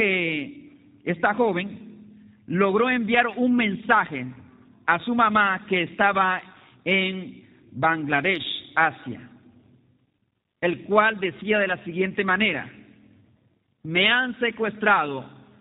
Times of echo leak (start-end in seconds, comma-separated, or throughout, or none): none